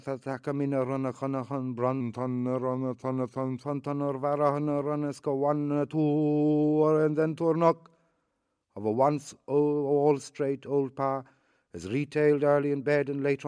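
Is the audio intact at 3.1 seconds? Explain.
No. From 2.01 to 3.64 s the audio suffers a wrong sample rate fault: its samples are played back slower than the rate they were captured at, with no conversion in between, in a way that fits 24 kHz material running at 22 kHz. Speed and pitch drop together, so the sound runs at about 0.92 times its proper speed and sits roughly 1.5 semitones flat, coming across as lower and more sluggish.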